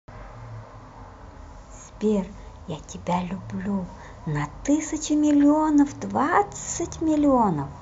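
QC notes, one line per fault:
0.13–7.81 s, clock slip clicks: faint ticks roughly every 70 ms across the speech, likely single samples slipping between unsynchronised clocks about 300 ppm apart.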